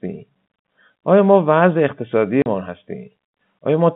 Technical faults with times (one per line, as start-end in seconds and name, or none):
2.42-2.46 packet loss filled with silence